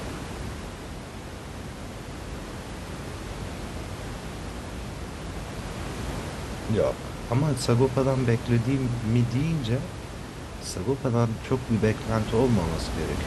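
No technical faults are audible anywhere in the speech; the only thing beneath it is the ordinary background noise of the room, sitting about 10 dB below the speech level.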